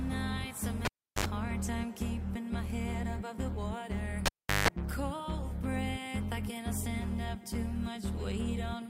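A pop, about 0.35 s of near silence, a short 50 Hz buzz and a second pop at 0.85–1.25 s, and again at 4.26–4.68 s with a longer buzz: a cable pulled and plugged in while live.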